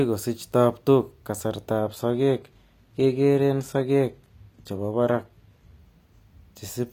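From 1.79 s to 5.79 s an adaptive stream switched to a lower bitrate, which fits a drop from 96 kbit/s AAC-LC to 20 kbit/s HE-AAC. The speech abruptly turns duller, with nothing above 14.9 kHz, and recovers without a gap.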